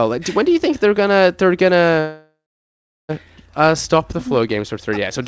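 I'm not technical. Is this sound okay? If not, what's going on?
No. Right after "think they're gonna they're", at 2.00 s, the sound stalls until 3.11 s. This is a call audio freeze. Delayed network data likely caused it. The last sound stretches, then goes silent for about 0.7 s. Speech then resumes where it stopped, with nothing lost.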